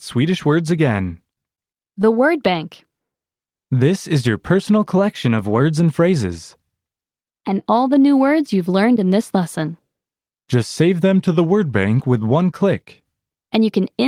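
A short stall from a late packet occurs at 1.55 to 1.59 s. A packet arrived after its playout time, so the jitter buffer ran dry and the receiver stretched the last sound by 27 ms to bridge the gap. Playback then resumed exactly where it stopped, so nothing is lost, but the end-to-end delay grows by those 27 ms. You hear a sound held a touch too long, with a faint buzzy or dipped quality.

A jitter buffer slow-down follows from 2.13 to 3.79 s. With its reserve running low, the receiver repeated single pitch periods and fragments of pauses over and over, adding 101 ms in total. The speech plays at 94% speed with its pitch unchanged, so syllables sound drawn out and slightly sluggish.

A drift correction step runs from 4.98 to 5.61 s. Playback speed jumps up by about 6.1%, and pitch rises with it by about 103 cents, roughly a semitone, before snapping back. This is likely clock-matching software changing the rate in one step to drain its buffer. 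The voice briefly sounds sharpened and hurried, then drops back to normal.

A jitter buffer speed-up comes straight after, from 5.80 to 6.32 s. The buffer held more audio than its target, so the receiver cut out short pieces of one or a few pitch periods in a row, removing about 50 ms. The speech runs at 107% speed without any pitch change, which makes this stretch sound rushed and clipped.

A second drift correction step, in the opposite direction, appears at 11.03 to 11.87 s. Speed falls by about 6.1% and pitch drops by about 110 cents, a little over a semitone, then returns. This is likely the same kind of clock-matching rate change, this time refilling the buffer. The voice sounds briefly flat and slowed before recovering.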